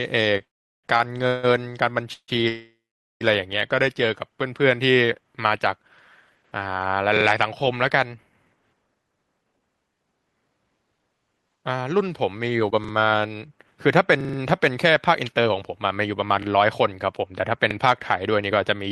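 Short stalls from a late packet at 0.37–0.42 s and 0.98–1.01 s: a packet arrived late and the jitter buffer emptied, so the receiver held the preceding speech for about 31 ms and then 17 ms. Nothing is lost, but the sound drags briefly with a faint buzz or dip.

Call audio freezes at 0.44–0.86 s, 1.27–1.45 s, 2.13–2.30 s and 2.48–3.23 s, likely from packets held up in transit. Each starts as a fading buzz or hiss. The first falls to about 390 ms of silence, the second never falls silent, the third goes silent for about 70 ms, and the last for about 450 ms. Speech resumes where it stopped, with gaps inserted rather than audio removed.

Repeated buffers at 7.17–7.25 s, 11.18 s, 12.84–12.93 s, 14.21–14.38 s, 16.43 s and 17.71 s: fresh audio missed its deadline, so the device replayed its last block of about 43 ms, which fits a 2048-sample buffer. This happens once, twice, or four times at 14.21 s. 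Each instance is a hard-edged stutter.

Jitter buffer speed-up from 8.95 s to the end: after a backlog built up, the receiver trimmed small pitch-period slices repeatedly to shrink the delay. The speech runs about 9% fast at unchanged pitch and sounds noticeably hurried.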